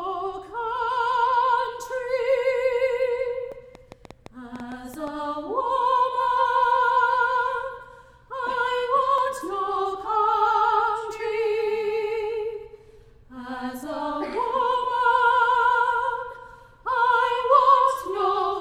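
At 3.52 s there's a small jump forward in the sound, most likely a dropped buffer (overrun). The program probably didn't collect a chunk of samples before the hardware wrote over it, so roughly 10 ms is missing and the two sides butt straight together with no gap of silence.

Then from 3.75 to 5.08 s comes a train of clicks, around ten of them at just under 7 per second, spaced unevenly rather than ticking like a clock. They're similar in shape and peak at roughly the level of the sound itself. That pattern of repeated, evenly shaped pulses likely comes from interference from nearby gear or a faulty connection or power supply.

At 9.18 s what is likely the same dropped-buffer skip happens again: another skip where about 10 ms is gone and the audio lurches ahead with no pause.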